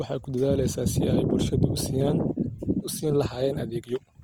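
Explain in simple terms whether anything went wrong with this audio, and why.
Yes. The recording was most likely squeezed hard by Opus compression, a method that shrinks audio files by storing only a rough outline of each slice of sound and filling in missing detail with approximations. Here it runs the whole way through, from the first moment to the last. The full range of high and low sound survives, but the speech comes out rough and grainy, with a noisy, sandy texture laid over it.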